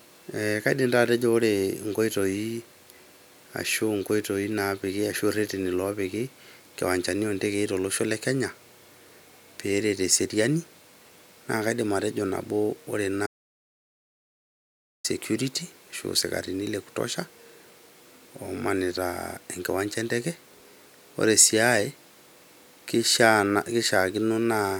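The input feed to the recorder was most likely interrupted, through a disconnected device, a failed link or a mute, while the recording kept writing silence, so this speech clip has an audio dropout to silence from 13.27 s to 15.04 s. The speech cuts off abruptly and comes back abruptly, and the 1.78 s gap is total silence with no room tone underneath, so whatever was said in that stretch is gone.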